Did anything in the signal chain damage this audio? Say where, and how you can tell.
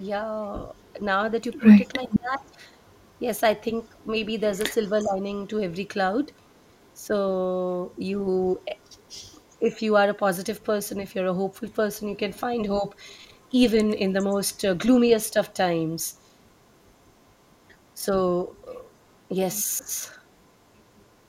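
Yes. Call processing at the loudspeaker side's echo canceller likely mishandled moments when both sides spoke at once, causing speech suppressed in double talk. The talker's level sinks in short patches between 0.0 and 2.59 s, where the dips are deepest at around 15 dB, and again at 5.04 to 5.23, 9.59 to 9.79, 12.79 to 13.55 and 17.97 to 18.13 s, where the drops are shallower, around 5 to 10 dB. The canceller turned everything down rather than separating the live talker from loudspeaker echo.

The same stage also let an echo leak through: a loudspeaker copy of the voice likely reached the microphone, was not fully removed, and came back 403 ms late. At 2.1 to 2.19 s the leaked fragment sits roughly 10 dB under the speech as a short delayed scrap. At 5.0 to 5.1 s it is about 35 dB down and only faintly present.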